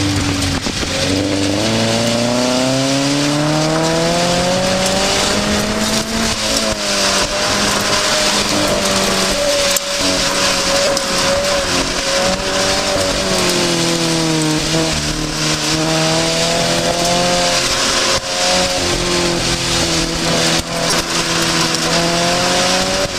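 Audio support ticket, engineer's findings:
Repeated buffer, 10.86 s and 20.91–20.93 s: brief click-buzz, tiny chunk looping 3 then 4 extra times, fits a 5 ms buffer. Playback underrun replaying the last buffer, dropping roughly 15–20 ms.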